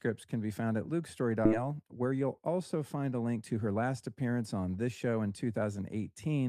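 At 1.45 to 1.47 s, just after "can be found at", a skip ahead occurs. About a second of speech was dropped. Playback jumps forward with no gap.

From 1.57 to 3.83 s, a jitter buffer speed-up follows. Short pitch-period pieces, roughly 200 ms in total, were removed. Speech runs at 109% speed, hurried but unchanged in pitch.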